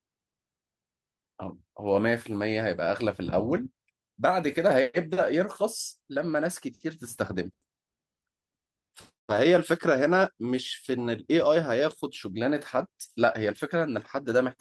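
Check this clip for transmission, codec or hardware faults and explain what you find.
Nothing turns up on this speech recording: no transmission, codec or hardware problems could be heard anywhere in it.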